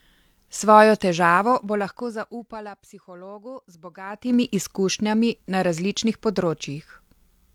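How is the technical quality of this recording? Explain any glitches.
The recording has two bursts of zipper noise, where the gain was changed in unsmoothed 2 dB jumps. From 1.3 to 2.8 s the level falls about 20 dB at roughly seven steps a second, and each jump leaves a small click, heard as slow ticking. From 4.02 to 4.36 s it rises about 20 dB at around thirty steps a second, so the clicks merge into a short zipping buzz over the speech.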